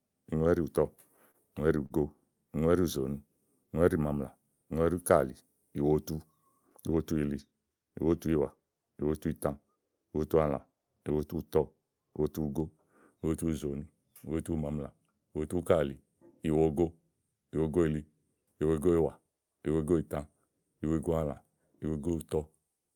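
A late packet twice left the jitter buffer empty, causing a short stall from a late packet. The last sound is held about 27 ms at 1.31–1.36 s and 44 ms at 1.86–1.92 s, with a slight buzz or dip, nothing lost.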